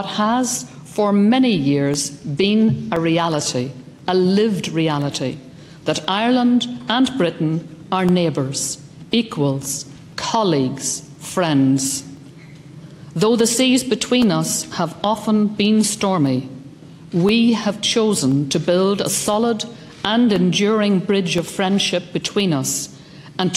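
Regular ticks recur every 1.02 s from 0.92 s to 23.43 s: periodic USB or driver dropouts, each blanking roughly half a millisecond of audio with silence.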